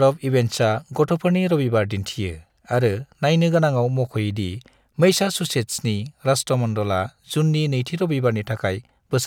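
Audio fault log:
Nothing to log here, as the speech comes through without any technical trouble worth noting.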